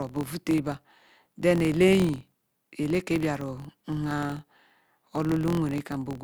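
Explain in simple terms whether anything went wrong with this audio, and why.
Something went wrong in the processing: the filter restarted on every block. Instead of carrying its memory forward, the filter starts each chunk of audio from silence, so every chunk begins with a tiny click. These clicks arrive about 43 times a second, which fits blocks of 1024 samples, and they run together into a low buzz under the speech from start to finish. The buzz gets louder when the speech is louder.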